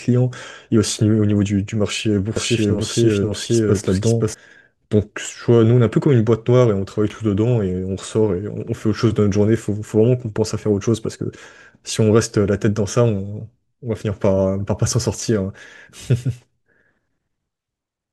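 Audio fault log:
2.36–4.34 s, doubled audio track: the speech plays twice, an equally loud, dry copy trailing about half a second and cutting in and out abruptly, likely from a second, slower capture path.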